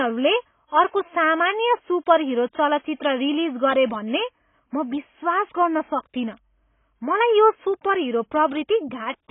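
Speech, damaged by AAC compression from start to finish. Nothing is heard above about 3.7 kHz, so the sound is dull and boxy. The damage is heavy. Sibilants turn fizzy and smeared, and sustained sounds warble. The likely cause is a low-bitrate AAC-LC encode, something near 16 kbps. At that rate the encoder lowers its cut-off to save bits. It coarsely quantises what remains and leaves gaps in the spectrum.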